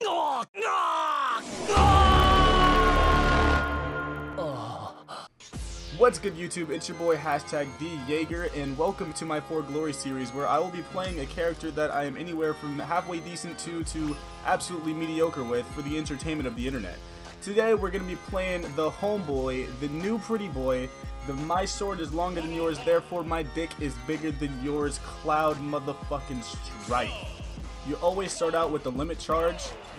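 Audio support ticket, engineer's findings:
Steady tick pattern, whole clip, 0 to 30 s, about 25 per second, so it lands as a buzz riding on the audio and gone in the gaps. Probable component: sample-rate converter, resampler restarted on every block. Each 40 ms block is converted in isolation, so the edges get filled with wrong neighbour samples and leave a small glitch every block. The conversion was a 24 to 48 kHz upsample.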